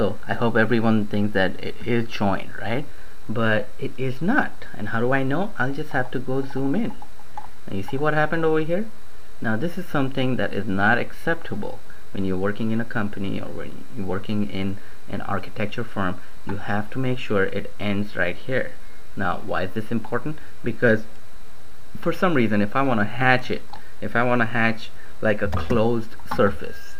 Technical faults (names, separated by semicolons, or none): none